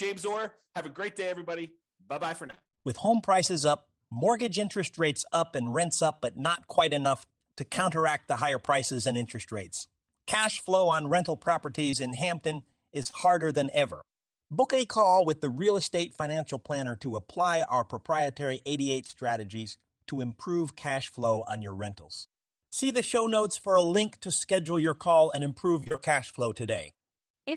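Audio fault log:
2.47–2.87 s, repeated packet loss (robotic sound): choppy, with pieces dropping out. Roughly half of this 0.39 s stretch was lost in short holes no longer than about 24 ms, each patched by extending the preceding sound before the next hole arrives.
11.91 s, short concealed packet loss: a brief smear or wobble. About 20 ms never arrived in time, so the receiver extended the last sound to cover it, then blended back into the real audio. The hole's length fits a lost 20 ms packet.
13.03–13.15 s, short concealed packet loss: a slightly longer wobble. Three consecutive holes of about 20 ms each were filled by continuing the last sound, so the smear stretches over roughly 0.12 s before the real audio returns.
19.07–19.15 s, short concealed packet loss: a short smear. Two back-to-back holes of about 20 ms were filled by extending the preceding sound, then cross-faded into the audio that arrived.
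25.81–26.00 s, repeated packet loss (robotic sound): choppy, robotic sound. Nearly half of this 0.19 s span, about 100 ms, was missing, in holes up to about 27 ms long. Each hole was patched by stretching the last sound, so the texture breaks up repeatedly.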